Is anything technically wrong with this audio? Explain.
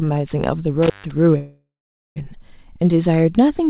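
Yes, there are two faults. From 0.83 to 1.11 s, crackle brackets a roughly 141 ms dropout with faint hiss, an intermittent contact where a loose cable or plug briefly opened. From 1.38 to 2.18 s, the sound stretches into a fading buzz or hiss, then about 480 ms of silence, before resuming where it stopped. This is likely a call audio freeze: delayed packets emptied the jitter buffer, inserting a 779 ms gap with nothing lost. The call path's narrow band, with nothing above 4 kHz, fits G.711 telephone coding.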